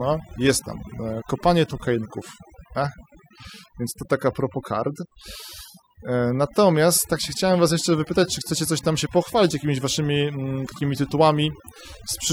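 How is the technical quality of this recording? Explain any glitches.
The recording is compromised by overdone noise removal across the whole clip. Set far too hard, the denoiser cuts any frequency band resembling noise, so gaps between phrases drop to near silence sprinkled with twinkling specks and quiet parts of the voice are cut along with the noise. A spectrogram shows blank background with isolated flickering dots and ragged, hollowed-out harmonics.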